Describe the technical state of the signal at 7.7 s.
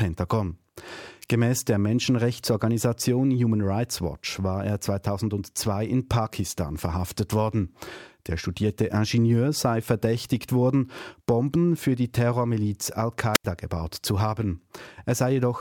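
At 7.7 s the speech signal is intact, with no dropout, distortion, glitch or other technical fault to be heard.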